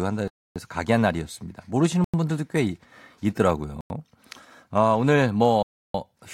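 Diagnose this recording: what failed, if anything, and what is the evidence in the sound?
Driver or buffer stage: blocks of digital silence cut the speech at 0.28–0.56 s, 2.04–2.14 s, 3.81–3.90 s and 5.63–5.94 s. The two 93 ms gaps fit a 4096-sample buffer left unfilled in time, so zeros played instead.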